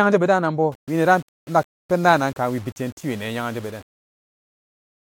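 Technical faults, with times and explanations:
0.72–5.03 s, low bit depth without dither: from 0.72 s to the end, the speech takes on a grainy, gritty edge that rises and falls with the voice, with the error sitting roughly 30 dB below the signal. The likely cause is rounding to about 7 bits with no dither, so the error tracks the waveform as distortion. A dithered reduction would instead leave a steady, constant hiss, and background noise would continue through pauses.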